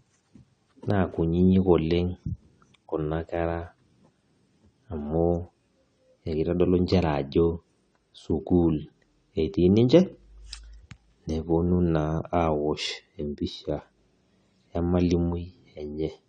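From start to end, the speech has a dull, smeared quality. Nothing sounds above about 9 kHz. Sibilants turn fizzy and sustained sounds warble. This is likely AAC compression, with the damage plainly audible and a sound that points to roughly 32 kbps.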